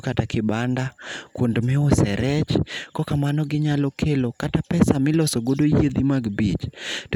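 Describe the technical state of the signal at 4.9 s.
At 4.9 s the speech signal is intact, with no technical fault present at that moment.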